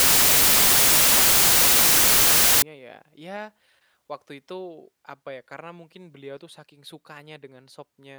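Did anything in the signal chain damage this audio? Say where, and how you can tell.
Yes. From 0.00 to 2.62 s the speech is replaced by loud, harsh broadband noise: samples built from the wrong bytes at the sample-format conversion stage. Byte order or alignment is wrong, so the fast-changing low bits become the large part of each value. A spectrogram shows flat full-band noise, and the waveform is dense.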